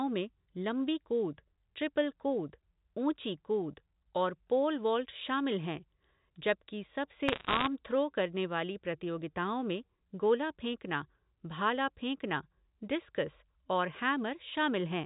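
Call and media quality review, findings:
Dense crackle of sharp ticks over unchanged speech, 7.28 to 7.67 s. Probable component: digital phone line. Bit errors, roughly one to two percent, flipping sign or high bits in single mu-law samples, each producing a click. Band-limited below 4 kHz with faint level-following quantisation hiss, consistent with G.711 mu-law telephone coding on a 64 kbps line.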